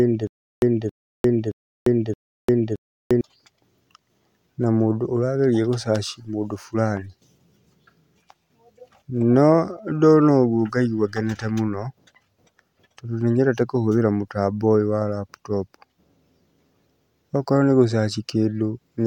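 Right from the start, already under way, and running until 3.21 s, there's a stutter with silent gaps: a 272 ms burst of speech repeats four times, each followed by about 349 ms of dead silence, likely a stalling stream replaying its last fragment.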